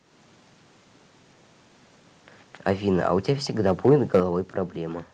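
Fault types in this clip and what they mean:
Microphone overload: A short harsh crackle at 2.67 s, then a longer gritty, splattering stretch from 3.66 to 4.2 s on the loudest speech, with peaks about 5 dB past the limit. The likely cause is input gain set too high, so the converter flattens the waveform tops.
Microphone volume stepped down: At 4.2 s the speech and background both drop abruptly by about 5 dB in a single step, immediately after the distorted stretch. This is likely the call software reacting to the clipping by cutting the microphone's input volume at once.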